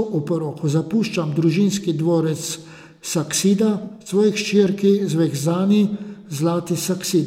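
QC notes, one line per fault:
3.84 to 4.12 s, AAC frame loss with concealment: a cluster of short dropouts, about 150 ms gone in total across roughly 210 ms, the longest gap around 70 ms. The decoder patches each hole from the last good spectrum, so the speech smears and turns phasey but never drops to silence.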